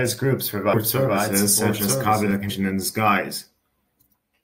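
From the start of the clip, already under way, until 2.31 s, a doubled audio track is present: the speech is heard twice, with a second copy trailing the first by roughly one second and sitting around 5 dB lower. The delayed copy is full-band and dry, carrying no reverberant tail or room colouring, and it cuts off abruptly at 2.31 s. The likely cause is the same signal reaching the mix a second time through a slower path.

At 2.49 s there is damaged data in a compressed stream, heard as a brief glitch lasting under 20 ms. At that point the decoder hit corrupted frames it could not read correctly, lost synchronisation and resumed at the next valid frame header, so the audio breaks momentarily rather than continuing smoothly.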